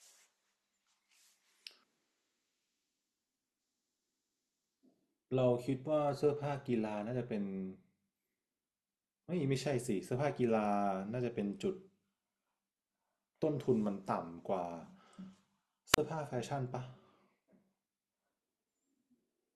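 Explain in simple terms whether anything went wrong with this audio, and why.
At 15.92 to 15.98 s there is a wireless microphone squelch dropout. The radio signal faded, so the receiver muted the speech for about 35 ms.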